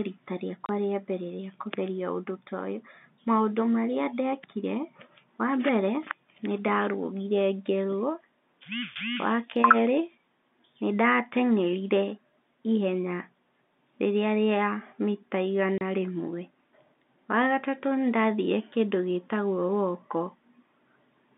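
At 0.66 s, just before "rĩa mbere rĩa kũgeria", and again at 15.78 s, packet loss filled with silence drops 30 ms of the speech, which fits a single lost packet each time. Each hole cuts in and out abruptly, leaving a brief gap in the narrow telephone-band sound.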